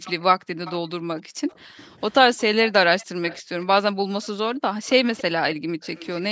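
From 0.05 to 6.22 s a faint second copy of the speech trails the original by 285 ms, sitting roughly 20 dB down. This is likely an echo leak from a far-end loudspeaker that the echo canceller failed to suppress. The fixed delay and the separate, weaker copy set it apart from room reverberation, which smears the sound instead.

Between 0.38 and 5.79 s the background is gated by the echo canceller. The room sound drops away while the far end plays, by up to about 40 dB, and the drops add up to around two seconds. These are quiet gaps in the background, not the added copies heard in the echo leak.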